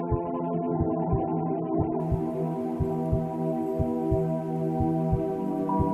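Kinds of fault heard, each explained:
Adaptive stream starting at a low bitrate: the player opened on a low-bitrate version, which sounds like AAC at around 8 kbit/s, so nothing reaches above 3.5 kHz until about 2.0 s. Then quality jumps without any gap, consistent with about 96 kbit/s. A spectrogram shows the top band suddenly filling in at that point.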